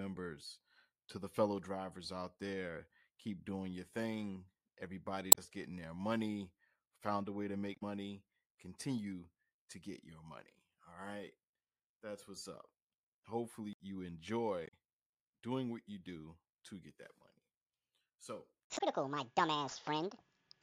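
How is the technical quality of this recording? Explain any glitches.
The recording has damaged data in its compressed stream at four points: 5.29–5.39 s (just before "getting their money found"), 7.72–7.83 s (right after "found a way to"), 14.63–14.74 s and 18.74–18.81 s. Each time, corrupted bytes leave the decoder misreading frames and hunting for the next valid header, so the speech breaks into a brief chirp, squawk, click or short hole lasting about 0.07 to 0.11 s.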